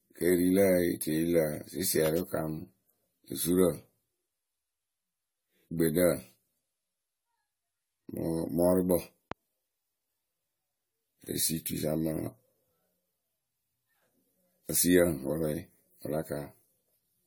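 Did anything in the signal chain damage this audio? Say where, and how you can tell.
Yes. At the codec stage, generation loss runs through the whole speech clip, likely from about seven successive AAC-LC passes at 64 kbit/s. The swirling, hollow smear and blurred attacks are worse than one encode at that bitrate would produce.

A loud pop at 2.06 to 2.08 s and another at 9.32 to 9.34 s jump about 10 dB above the speech, likely voltage transients in the analogue wiring. The speech continues underneath, so these are not dropouts.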